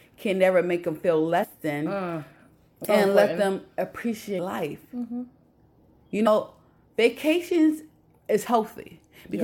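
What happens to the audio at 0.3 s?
Nothing goes wrong at 0.3 s; the audio plays through that moment intact, with no dropout, click or distortion.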